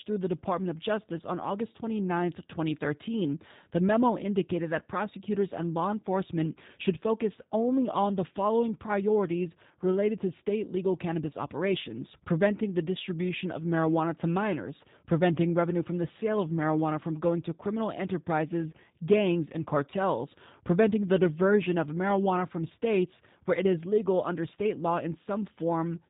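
Throughout, the speech sounds rough and faintly synthetic, with nothing above 3.8 kHz: the G.729 codec rebuilding each frame from a filter and sparse pulses.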